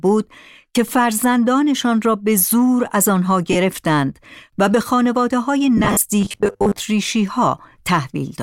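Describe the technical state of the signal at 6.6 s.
At 6.6 s the signal is inside a stretch of robotic sound from repeated short buffers, running 6.21 to 6.80 s. Audio likely arrives too slowly, so about half the time is filled by replaying 10 ms slices, imposing a rigid 100 Hz metallic buzz that, unlike codec warble, holds a fixed pitch.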